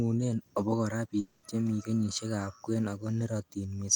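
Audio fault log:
1.19 to 1.46 s, long network dropout: for just over a quarter of a second the speech gives way to a smeared buzzing continuation of the last sound, which fades without ever reaching silence. About 240 ms of the original is gone, and the speech resumes further on with that part missing. The likely cause is a run of audio that never arrived over the network, with the receiver stretching the final sound it had to fill the gap.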